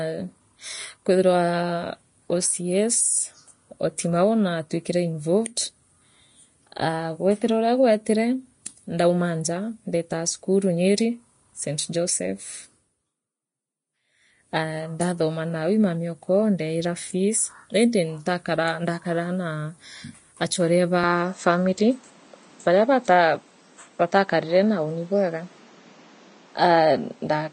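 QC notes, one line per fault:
Throughout: Vorbis compression, likely at a low quality setting. Nothing is heard above 10.6 kHz, and the treble is so coarsely quantised that its fine detail is replaced by noise of similar energy. The damage is plainly audible, as hiss and grain, roughened tones and blurred attacks.
21.04 s to the end: input switched to a poorer device, likely another microphone or a headset call profile. The band now stops at 8.4 kHz, so the sound turns duller. New background noise sits roughly 30 dB below the speech. There is no gap at the switch and no clear level jump.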